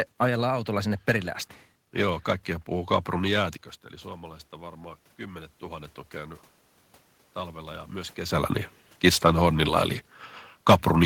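Around 3.5 s the talker drifts away from the mic. Then from 4.03 to 6.47 s, right after "jäätiköstä eli", automatic gain rising kicks in, lifting about 4 dB, so the voice and room noise swell up together.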